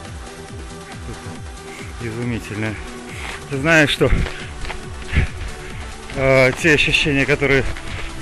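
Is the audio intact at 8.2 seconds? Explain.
Yes, the audio at 8.2 seconds is intact, with no dropout, click, distortion or other fault audible at that moment.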